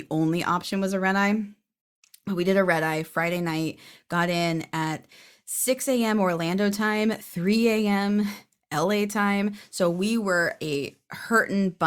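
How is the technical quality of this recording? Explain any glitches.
No technical glitches can be heard anywhere in the recording. Nothing in how the speech was captured or carried calls for any explanation.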